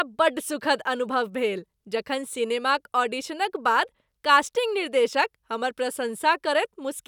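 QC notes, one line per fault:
No faults detected.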